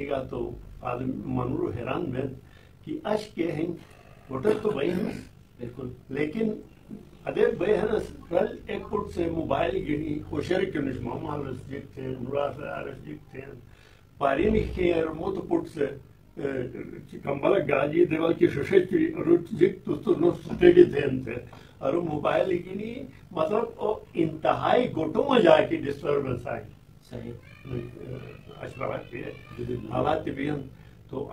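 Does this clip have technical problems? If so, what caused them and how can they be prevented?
Yes. Overlap-add ripple throughout: frames overlap without constant-gain summing, so level dips about 11 dB at around 50 Hz. Use windows satisfying the constant-overlap-add condition.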